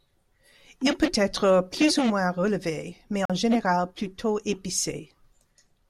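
At 3.25 s, right after "ou moins relevé mais", the speech drops into a block of digital silence. It lasts about 43 ms and ends at 3.30 s, just before "général plutôt". The length fits a 2048-sample block. The output was likely not filled in time, so zeros went out instead. The signal stops dead and restarts with no fade. What remains is a brief hole.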